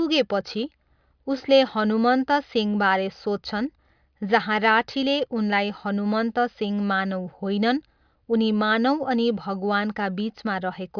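Nothing stood out as a technical fault when listening to the speech in this recording.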